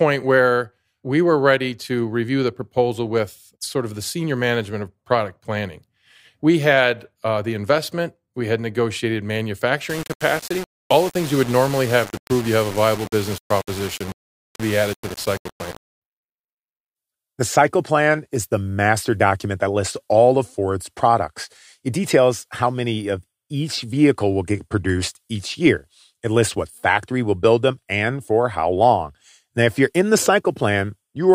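From 9.90 to 16.02 s, the speech was likely requantized to very few levels by plain rounding with no dither, a grainy texture that fits roughly 5 bits. This is low bit depth without dither. The rounding error tracks the waveform rather than forming a steady hiss; it sits only about 15 dB below the signal and turns each syllable rough and gritty, with the grain shifting as the speech moves and the softest parts breaking up.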